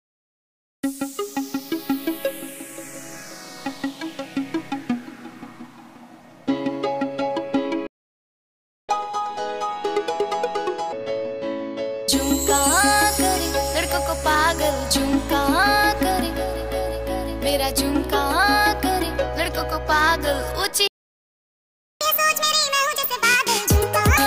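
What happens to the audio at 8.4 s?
At 8.4 s the audio is in the middle of a playback stall. The sound cuts off abruptly at 7.87 s and stays silent for about 1.02 s until 8.89 s, when it comes back. The likely cause is the player running short of data or its playback thread being held up, so nothing reaches the output until it recovers. A brief dropout is a gap of a few milliseconds that reads as a click or tick. This one lasts a full second and clearly breaks the flow.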